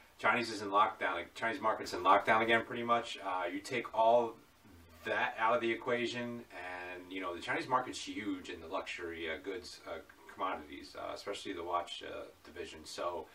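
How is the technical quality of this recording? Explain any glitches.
The recording has one clear technical glitch, a level fault near the start.

Sudden gain jump, 1.84 to 2.61 s: the level steps up by about 6 dB from one sample to the next, holds there, then drops back. This is likely a digital gain setting applied without any ramp, so the change lands instantly rather than fading in. Because the jump happens after the signal is captured, the sound and the background noise rise together and fall together at the same two moments.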